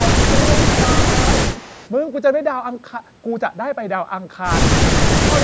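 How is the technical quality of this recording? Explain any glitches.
The recording has two kinds of glitch, both typical of a call. The speech dips three times, and once it is followed by a faint echo. The band stops at 8 kHz, which fits ordinary call microphone processing.

Speech suppressed in double talk occurs from 0.0 to 0.83 s, at 1.0 to 1.1 s, and from 5.03 to 5.28 s. The level drops by about 15, 10 and 20 dB. Both sides were likely talking at once. The echo canceller then turned the near talker down along with the echo. The speech dips in level.

An echo leak appears from 1.52 to 1.9 s. A delayed copy of the speech trails it by 216 ms, at about 20 dB below the speech. The likely cause is a loudspeaker on one side whose echo canceller missed part of its own pickup. It sounds like a faint repeat.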